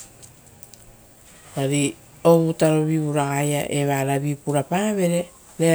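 Speech recording with no technical faults to report. Nothing in the audio points to a problem anywhere in the recording or playback chain.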